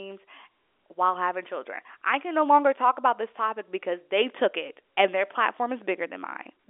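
No technical fault can be heard in the speech, which carries the narrow band of G.711 telephone coding, with the sound held between 300 Hz and 3.5 kHz and nothing above 3.7 kHz, which fits a 64 kbps A-law telephone line.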